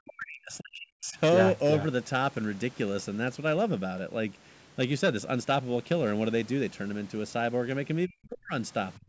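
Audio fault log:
0.0–1.18 s, 8.07–8.53 s and 8.96–9.08 s: speech suppressed in double talk. The speech sinks sharply. At its deepest the drop is about 40 dB, close to silence. The first dip lasts roughly a second. The later two are brief, about half a second and a tenth of a second. The likely cause is an echo canceller hearing both sides at once. Unable to tell the talker from loudspeaker echo, it turned the talker down too.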